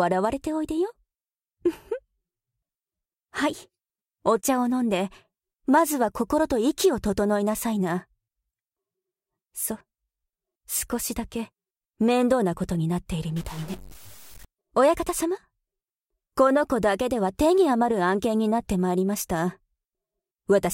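From 13.36 to 14.45 s the sound turns harsh and buzzy, with a grainy noise floor that persists into quieter moments. The likely cause is a stuck bit, one data bit held fixed by a faulty line or converter, offsetting many samples by a step of roughly -40 dBFS. On a waveform the trace looks jagged and stepped, with small values pushed off zero. A spectrogram shows broadband hash spread across the band for that span.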